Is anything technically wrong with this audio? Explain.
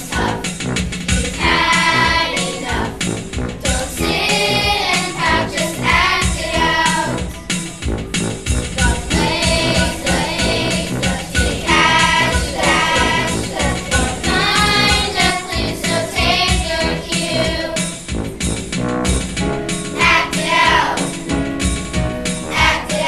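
Yes. From 8.85 to 15.31 s a doubled audio track appears: a full-band copy trails about one second behind, somewhat quieter, likely from a slower second capture path. The waveform and spectrogram show every event repeated one second later, with abrupt edges.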